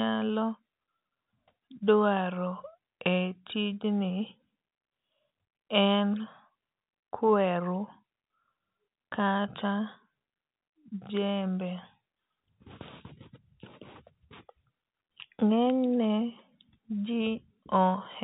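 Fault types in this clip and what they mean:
No fault types are present in this clip, so there is nothing to list or explain.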